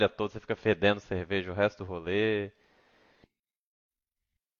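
No faults to report.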